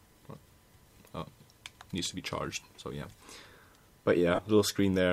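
At 4.35 s, lasting until 4.39 s, there is a burst of lost LE Audio frames. The gap is about 37.5 ms, which fits five consecutive 7.5 ms LC3 frames going missing over the Bluetooth link. Instead of falling silent, the decoder fills the hole by replaying the last good spectrum with randomised signs. Any tonal content turns into a short, noisy smear. That smeared, hissy fill is what separates it from a plain dropout, which would be a clean cut to silence. Outside the gap, the light lossy compression leaves only slight codec texture.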